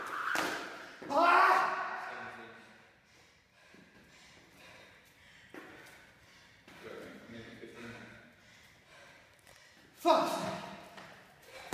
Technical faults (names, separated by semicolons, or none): sudden gain jump